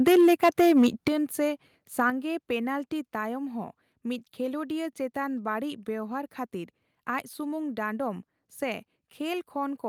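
From 0.07 to 1.08 s the microphone input gain was likely set too high, so the loudest peaks ran into the converter's ceiling, up to about 7 dB over it. This microphone overload flattens the tops of the waveform in roughly a tenth of the samples, giving the louder syllables a harsh, crackly, gritty edge. A second, shorter overload at 1.99 to 2.08 s likely had the same cause. It pushes only about 2 dB past the limit, clips around one percent of samples, and adds a brief rasp.

The call software likely reacted to this by lowering the device's input volume in steps. These microphone volume step-downs come at 0.08 s (about 2 dB), at 1.08 s, right as the first overload ends (about 7 dB), and at 2.1 s, just after the second (about 5 dB). Each is heard as a sudden drop in level that takes the voice and the background down together, with no gradual fade.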